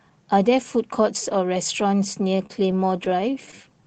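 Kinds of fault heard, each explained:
Repeated stalls (stutter): the jitter buffer ran dry 14 times from 2.37 to 3.82 s, each gap up to 28 ms stretched from prior sound, showing as smeared, repeated spectral slices.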